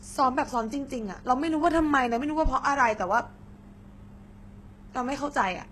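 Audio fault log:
Throughout: HE-AAC compression. The treble sounds bright but synthetic, and s sounds come out gritty and metallic. Nothing is heard above 12.3 kHz. The likely cause is a coder that transmits only the lower spectrum and rebuilds the top by copying lower bands upward under a coarse envelope. The copied harmonics do not line up with the real ones. The damage is plainly audible, which fits a very low bitrate, around 16 kbps.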